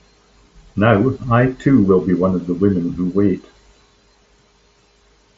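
The speech shows no technical faults, and its band stops at about 8 kHz, which fits a wideband Bluetooth headset link using the mSBC codec.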